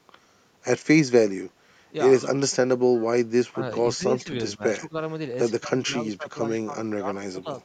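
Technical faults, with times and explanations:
2.97–3.03 s, echo leak: a faint delayed copy of the speech arrives about 97 ms behind it, roughly 30 dB below the voice. It is likely loudspeaker sound that the far end's echo canceller failed to remove, sent back down the line.
3.51–3.62 s, 3.96–4.30 s, 4.57–4.93 s, 5.59–6.35 s and 6.65–7.48 s, speech suppressed in double talk: the voice dips by about 15 to 20 dB in pieces, likely because the echo canceller mistook overlapping talk for echo and turned everything down.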